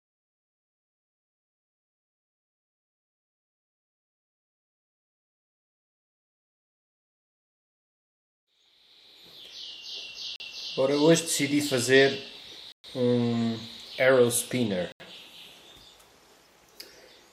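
Three blocks of digital silence break up this audio, where the output stream was left empty, which points to the program not filling its buffer in time. At 10.36 s there is a 40 ms gap, at 12.72 s a 120 ms gap opens an audible hole, and at 14.92 s an 80 ms gap follows both. Each cuts abruptly to silence and back.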